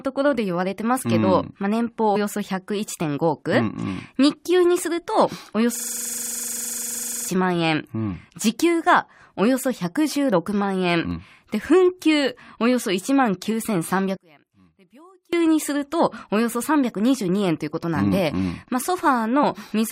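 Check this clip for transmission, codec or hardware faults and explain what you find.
Two faults stand out in this speech clip.

A system hang loop runs from 5.76 to 7.29 s. The host or driver stalled while the audio hardware kept replaying the same ring buffer, so a 42.67 ms slice of sound repeats exactly, which fits a 2048-sample buffer. At a loop rate of 23.4 Hz, the repeats come too fast to hear as separate stutters. They merge into a coarse, rattling buzz that persists for about a second and a half before normal audio resumes.

From 14.17 to 15.33 s, the speech nearly disappears when played in mono, dropping by about 31 dB. The likely cause is one channel inverted: one stereo side has its polarity flipped, so the centred speech, common to both channels, cancels when the two are summed. For just over a second the voice collapses to near-silence in mono, then returns at full level.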